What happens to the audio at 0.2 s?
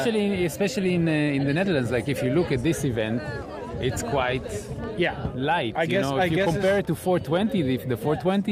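Nothing goes wrong at 0.2 s; the audio plays through that moment intact, with no dropout, click or distortion.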